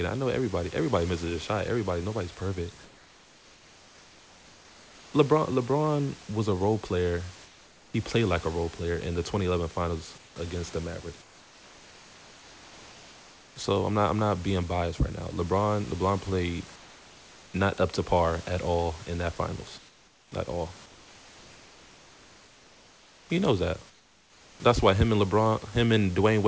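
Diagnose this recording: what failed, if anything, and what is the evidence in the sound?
Call processing likely dropped to discontinuous transmission in the pauses, so the receiver generated comfort noise in place of the background at 2.84–5.14, 7.46–7.94, 10.18–10.36, 11.22–13.56, 16.76–17.54, 19.78–20.32, 20.86–23.30 and 23.90–24.60 s. The real room noise gives way to a flat, featureless hiss about 4 to 6 dB quieter.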